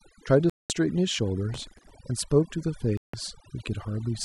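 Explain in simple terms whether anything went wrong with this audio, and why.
A few things went wrong. Throughout the whole clip there's overdone noise removal: the cleanup tool was cranked too hard, so the background drops away and breaks up into little twinkly specks, and the voice's quieter bits got stripped out along with the noise.

The sound drops out completely twice: from 0.50 to 0.70 s, about a fifth of a second, and again from 2.97 to 3.14 s, a bit shorter. Each time it just stops and then resumes. That's likely a Bluetooth stall: interference delayed the wireless data, the headphones ran out of audio to play, and they waited for it to arrive.

From 1.54 to 1.91 s there's a gritty crackle riding over the voice. That's processor overload crackle. The computer got too busy to keep up with very small chunks of audio, each only a millisecond or two long. It missed a few dozen deadlines in a row and replayed stale bits of sound each time, and all those rough little patches blur together into that tearing noise.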